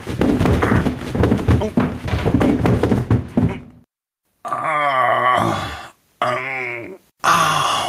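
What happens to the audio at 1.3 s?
At 1.3 s the audio shows gain pumping, which runs through the whole clip: the gain swings by roughly 10 dB, pulled down on each loud sound so loud and soft parts sit closer in level and sound squashed, likely from input gain set far too high with a fast limiter clamping it.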